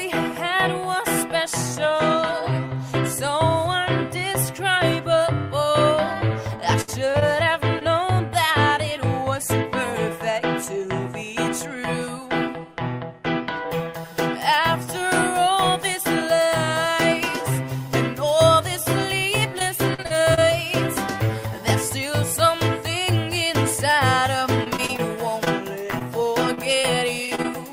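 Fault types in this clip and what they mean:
repeated packet loss (robotic sound): choppy stretches with pieces of sound missing, at 6.81 to 7.83 s, 19.59 to 20.41 s and 24.64 to 27.55 s. Audio kept arriving lost or late, and each hole, up to 63 ms long, was patched by continuing the previous sound.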